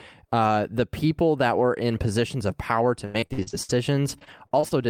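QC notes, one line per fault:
3.05–3.71 s, repeated packet loss (robotic sound): packets kept going missing, seven gaps up to 84 ms, about 300 ms in all, each patched by stretching the preceding sound. Nearly half the stretch is concealment, so the sound turns choppy.
4.09–4.73 s, repeated packet loss (robotic sound): another run of late or lost packets, five gaps up to 44 ms, about 120 ms missing and filled from prior audio. Concealment covers roughly a fifth of the span, giving a lighter, intermittent chop.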